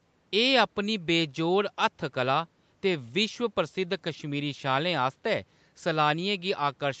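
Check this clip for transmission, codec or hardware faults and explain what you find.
No faults detected.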